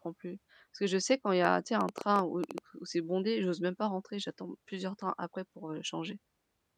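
From 1.45 to 2.59 s there's a train of clicks, about ten uneven pops at roughly 8 per second poking well above the speech, likely interference from nearby equipment.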